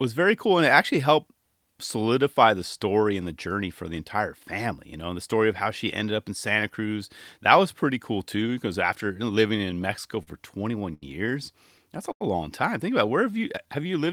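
From 9.47 to 10.29 s, just after "cool too because after", the speech shows repeated stalls (stutter). Packets kept arriving late, so the jitter buffer ran dry seven times and the receiver held on to the last sound, about 94 ms in all, the longest gap 39 ms. Nothing is lost, but the words drag and catch. Unlike a smooth slow-down, the rhythm is broken into separate hitches.

Two short stalls from a late packet follow, at 10.94 to 11.04 s and at 12.12 to 12.23 s, the second just before "long time". Each time one packet was missing when due, and the receiver stretched the last sound for 80 ms and then 88 ms before resuming where it left off. Each is a single held sound with a faint buzz or dip, not a cluster of catches.

From 13.25 to 13.92 s, after "about it where", a jitter buffer slow-down adds about 73 ms by repeating single pitch periods, so the speech runs at 90% speed. The pitch stays the same and the slowing is spread out rather than held at one point.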